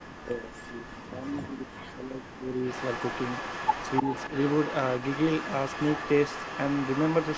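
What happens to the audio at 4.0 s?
Around 4.0 s the sound carries an echo leak, running from 2.66 s to 7.37 s. A delayed copy trails the voice by about 0.3 s, some 10 dB quieter. The likely cause is a far-end loudspeaker echo that the canceller failed to remove.

From 4.02 s to 4.12 s the talker's level dips by roughly 10 dB for about a tenth of a second. This is speech suppressed in double talk. The canceller likely mistook the talker for echo and turned both down.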